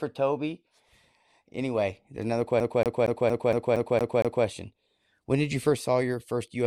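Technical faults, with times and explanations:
2.6 to 4.45 s, CD stuck on one turn: a scratch keeps sending the laser back one track at the same point on every rotation of the disc, so just after "there's another" the same 0.23 s slice of speech plays eight times in a row, with a brief mute at each jump back. The result is a fast, evenly spaced stutter, the familiar sound of a skipping CD, before playback carries on.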